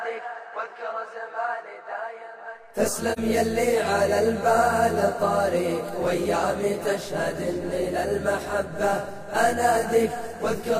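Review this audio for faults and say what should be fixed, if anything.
AAC frame loss with muting at 3.12 to 3.19 s: the decoder zeroed a span of about 43 ms, which fits one lost frame. Overlapping windows fade it out and back in, unlike a hard-edged sample dropout. Protect the transport against frame loss, through retransmission or error correction, before the decoder.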